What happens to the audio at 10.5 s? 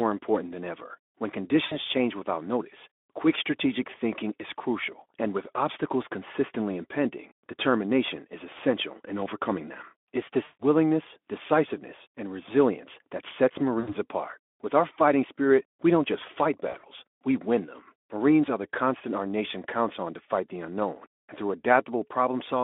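VoIP packet loss concealed by the speech codec, from 10.43 to 10.63 s. About 160 ms of audio went missing, and the Speex decoder bridged the gap by extrapolating its last pitch and filter at falling gain, so the speech smears into a fading buzzy tone or coloured noise.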